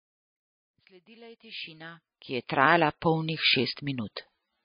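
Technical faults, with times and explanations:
Throughout, MP3 compression: the speech has nothing above about 5 kHz and sounds plainly watery, likely from a low bitrate around 23 kbps.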